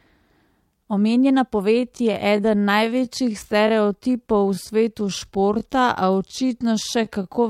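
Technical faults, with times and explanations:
1.69–7.49 s, time-stretched section: software likely stretched this stretch of the recording to fill a longer duration, running it at about 0.69 times its original speed and repeating short slices of the waveform to keep the pitch unchanged. From 1.69 s the speech abruptly slows while its pitch stays put, and the repeated fragments overlap, so syllables drag and sound drawn out to the end of the clip.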